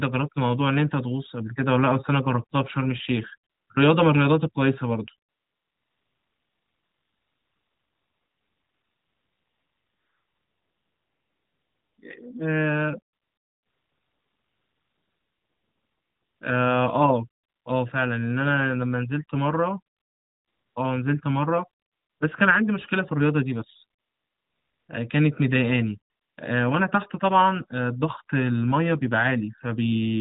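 Speech over a narrowband mobile link, lightly coded, with nothing above 4 kHz, which fits AMR-NB at its top 12.2 kbps mode. AMR comfort noise replaces the real background in the pauses. It occurs at 3.5–3.7, 5.3–12.0, 13.1–16.4, 17.4–17.7, 20.0–20.8, 21.8–22.2, 24.0–24.9 and 26.1–26.4 s. In each gap the sender stopped transmitting speech frames. The receiver filled the silence with smooth, steady synthetic hiss that switches in and out.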